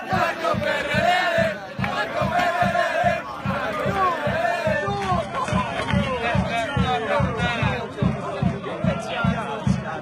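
At 4.74 s the audio switches abruptly, with no gap, to an adaptive stream at a lower bitrate and stays there to the end. A slowed connection forced the player onto a leaner encoding. The sound points to a move from a roughly 96 kbit/s AAC stream to an HE-AAC stream near 16 kbit/s. Treble disappears above about 11.8 kHz, and coding artefacts become more audible.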